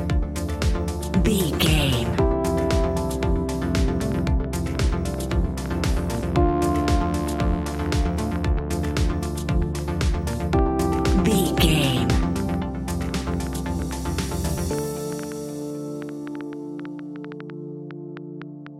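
From about 3.79 s right through to 18.68 s there's a train of clicks ticking over the audio: around seventy similar pops at roughly 4.7 per second, spaced unevenly, and peaking around 5 dB above the sound itself, so they stick out even in the quieter gaps. Same-shaped pulses repeating like that most likely come from electrical interference from nearby gear or a faulty connection or power supply.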